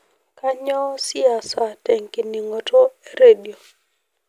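No technical faults can be heard anywhere in the recording.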